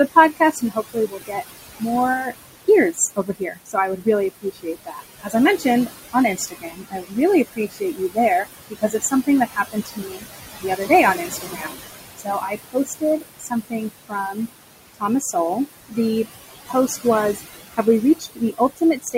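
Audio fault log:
throughout: noise suppressor artifacts. The suppressor treats the steady room background as noise and pulls those bands down by about 18 dB frame by frame. The noise sits about 11 dB under the speech, and the background drops away in pauses and swells back under each phrase.
0.11–14.38 s and 14.94–19.15 s: speech cut by the noise suppressor. Parts of the speech get classed as noise, so soft consonants, word endings and quieter stretches are pushed down with the background. The drops reach about 21 dB in the first run and about 20 dB in the second. The first run is hit far harder, with roughly five seconds of speech swallowed in total against well under a second in the second run. The affected sounds go faint or seem clipped off.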